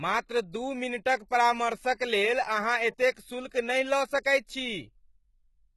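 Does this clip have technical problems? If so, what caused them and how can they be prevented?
Yes. Heavy HE-AAC compression runs throughout this speech, likely from a very low bitrate around 16 kbps. Nothing survives above 11.8 kHz, and the rebuilt treble is copied up from lower bands, so sibilants sound gritty and metallic. Encoding at a higher bitrate, or with plain AAC, prevents this.

Pre-echo sits at 1.29 to 1.31 s, right after "मात्र दू मिनटक", and again at 3.14 to 3.16 s. Quantisation noise spreads back about 21 to 23 ms ahead of each sharp onset, smearing it with a short hiss. More bitrate and a codec using shorter transform blocks on attacks avoid it.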